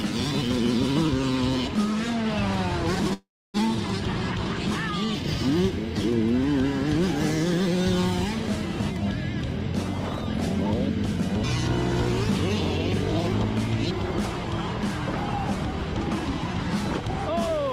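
At 3.13 to 3.57 s a call audio freeze stretches the last sound into a fading buzz, then about 270 ms of silence, likely from delayed packets draining the jitter buffer. The waveform shows a decaying smear and a flat gap, and the sound resumes intact but 405 ms late.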